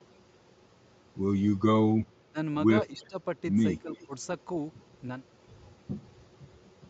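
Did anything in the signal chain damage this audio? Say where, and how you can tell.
Yes, and it's in the call processing. The speech ducks hard in three spots: 2.28 to 2.36 s, where it drops by roughly 25 dB, then 2.92 to 3.16 s and 3.82 to 4.13 s, each sagging about 15 dB. That's speech suppressed in double talk. Both ends were likely talking at once, and the echo canceller, unable to tell the local talker from loudspeaker echo, pulled the level down on everything.

Overlapping those dips there's an echo leak: a faint delayed copy of the talker trailing 308 ms behind, from 2.85 to 3.07 s at about 35 dB under the speech and again from 3.80 to 4.06 s, louder at about 25 dB down. The far end is likely on a speakerphone whose canceller didn't fully scrub what its mic caught, so residue got sent back. The steady delay is the giveaway that it's acoustic echo rather than reverb.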